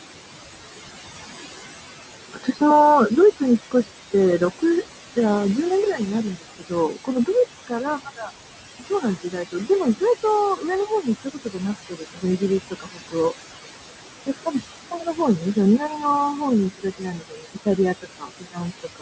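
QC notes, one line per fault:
Throughout: noise suppressor artifacts. The background sinks by about 16 dB in pauses and returns under speech.
2.33–5.17 s, 5.96–13.41 s, 14.26–19.02 s: speech cut by the noise suppressor. Soft consonants and word endings dip by up to about 18 dB and sound swallowed, because the suppressor mistook them for noise, not because the talker spoke quietly.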